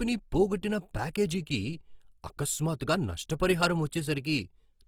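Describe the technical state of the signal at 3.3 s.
At 3.3 s the speech sounds grainy and rough, with noise filling the upper bands. It runs throughout the clip. The likely cause is Opus compression at a low bitrate, around 24 kbps.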